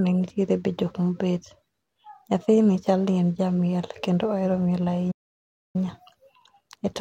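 At 5.11 s, just after "jamiel kendo ohero miel", the speech cuts out into silence. This is a playback stall. The gap lasts about 630 ms, ending near 5.76 s. The player most likely ran short of data, or its thread was held up, so nothing reached the output. The sound halts in mid-flow. Then it resumes after the pause.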